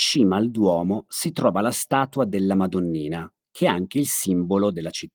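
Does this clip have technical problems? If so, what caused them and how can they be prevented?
No, there are no technical faults to trace or prevent; the speech came through Opus voice compression at 24 kbps in hybrid mode with the full audio band retained.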